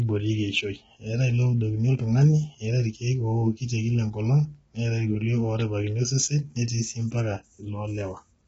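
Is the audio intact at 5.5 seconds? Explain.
No. At 5.5 seconds, as throughout, the speech sounds rough and grainy, with noise filling the gaps between harmonics and nothing above 7.8 kHz. This is likely low-delay AAC compression around 16 kbps, whose very short frames blur pitch harmonics, unlike the pre-echo of longer-frame codecs.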